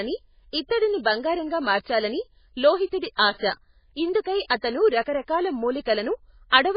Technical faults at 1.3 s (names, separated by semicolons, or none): MP3 compression